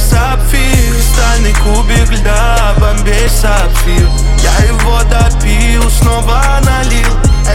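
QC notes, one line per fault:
3.27 s, dropped buffer (overrun): an abrupt jump forward in the sound and no gap of silence, likely because samples went uncollected before the hardware overwrote them, leaving about 20 ms missing and the surrounding audio spliced directly together.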